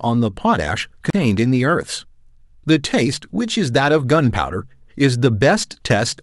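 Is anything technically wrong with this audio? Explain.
Yes: a CD skip at 1.10 to 1.13 s. The laser jumped tracks, muting briefly before the speech resumes elsewhere, visible as a narrow waveform gap and vertical spectrogram break.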